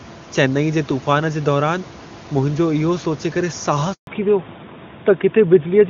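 A handover gap in this speech recording runs from 3.93 to 4.07 s, a 140 ms silence where the sound fades out within a few tens of milliseconds and nothing comes through. No speech frames arrived while the call switched networks, so that stretch is simply lost. A fallback to narrowband follows at 4.07 s and lasts to the end, with nothing above 4 kHz. The voice turns duller and rougher than the clear HD Voice before the gap, which sounds like a high-rate AMR-WB stream giving way to a narrowband codec such as AMR-NB at 12.2 kbit/s. The room noise sits about 22 dB below the speech.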